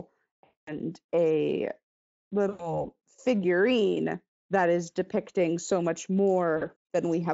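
Packets dropped from the stream at 0.43–0.76 s, 2.49–2.85 s before "figurine that is depicting", and 6.57–6.64 s after "is depicting so much". This is VoIP packet loss concealed by the speech codec: the decoder stretches the last sound into a fading buzz or noise.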